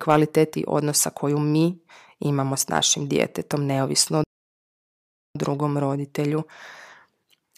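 A playback stall runs from 4.24 to 5.35 s: after "našim djetetom neovisno o" the speech cuts to silence for about 1.1 s, then resumes with "drugom roditelju". The player likely ran short of data or had its output thread blocked until it recovered.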